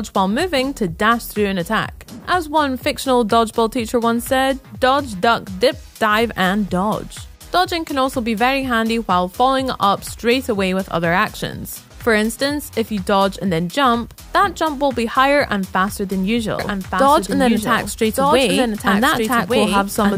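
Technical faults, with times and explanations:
16.59 s to the end: doubled audio track. A second full-band copy of the sound enters abruptly and runs about one second behind, a few dB quieter, likely from a slower capture path. Unlike an echo or reverb, it never decays and carries no room colour.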